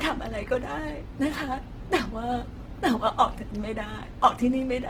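Throughout the speech, the sound is rough and grainy, with a noisy texture in place of clean tones. The likely cause is Opus compression in its music mode at a low bitrate, near 16 kbps. Starved bands get filled with folded or noise content. Bandwidth still extends to about 20.2 kHz.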